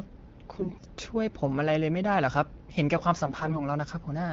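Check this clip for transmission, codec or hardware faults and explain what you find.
Two brief bursts of AMR bit errors disturb this speech, which is carried over AMR-WB at a quality consistent with 12.65 kbit/s. They run from 0.56 to 0.86 s and again from 3.23 to 3.62 s. On a weak link, roughly a tenth and then somewhat fewer of the less protected bits arrive flipped. This misplaces the excitation pulses and skews the fine pitch, gain and spectral values. Pitch and level hold, but the sound turns hoarse, scratchy and gargly. A spectrogram shows smeared, noise-filled harmonics in those spans, while the waveform's envelope barely changes.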